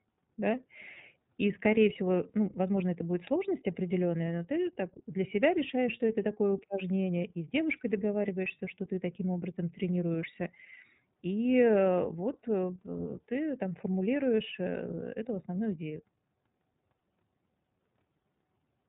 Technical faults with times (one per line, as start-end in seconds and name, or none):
0.00-18.89 iLBC codec